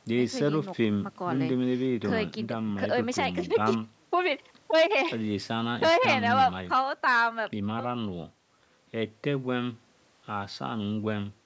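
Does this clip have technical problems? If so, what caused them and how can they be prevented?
No, nothing here needs fixing, since the speech simply went through a call's microphone processing, which trims the lowest bass and leaves nothing above 8 kHz, and that's just how such a path normally behaves.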